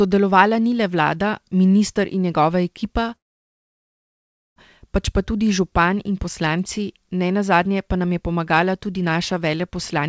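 At 3.16 s, after "minister in njegova ekipa", a call audio freeze drops the sound out for 1.4 s until 4.59 s. Speech resumes where it stopped, likely from delayed packets. The call band ends at 8 kHz.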